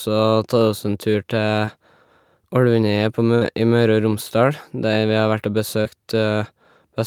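At 1.65 to 1.69 s there is a short concealed packet loss. About 20 ms of the speech never arrived in time, and the receiver filled the hole by extending the preceding sound before crossfading back. It comes across as a quick smear or wobble. The same fault recurs at 5.81 to 5.87 s, covering about 40 ms, where the smear is longer and a brief stretch of sound is lost.

Between 3.35 and 3.43 s a burst of packet loss removes about 60 ms. The decoder holds the last sound and fades it down across the gap, giving a held buzz or dying hiss before the speech resumes further on, with the intervening part missing. In the waveform this shows as a tapering envelope followed by an abrupt restart. On a spectrogram it appears as a frozen, repeated spectral slice that fades out, with a vertical seam where the real signal returns.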